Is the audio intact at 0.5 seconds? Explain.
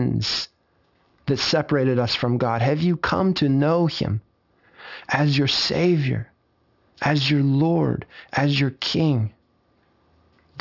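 No, at 0.5 s you're already hearing aliasing, and it runs through the whole clip. The speech was brought down to a 12 kHz rate with no filtering first, so everything above 6 kHz folds back as wrong tones, leaving the sibilants gritty and metallic.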